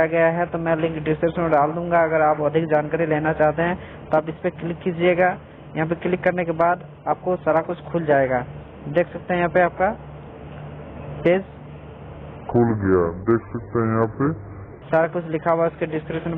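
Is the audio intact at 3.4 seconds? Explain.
Yes, the audio at 3.4 seconds is intact, with no fault audible at that moment.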